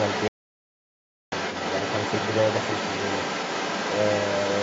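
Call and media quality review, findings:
Other side's voice leaking through: second talker audible across the whole clip, 0.00 to 4.6 s, sitting only a few dB under the near-end speech. Likely cause is an echo canceller on the talker's device failing to remove far-end loudspeaker playback from the microphone signal, so the residual echo passes into the send path.

Audio dropout to silence: hard cut at 0.28 s, silence until 1.32 s, about 1.04 s lost with no room tone in the gap. Likely cause is a momentary loss of capture input (device disconnect, link failure or mute) while the encoder kept writing silence. Speech resumes abruptly mid-flow. The call microphone processing band-limit at 8 kHz is present and expected.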